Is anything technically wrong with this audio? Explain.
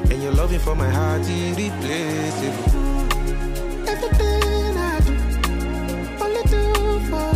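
No, nothing technically wrong is audible here.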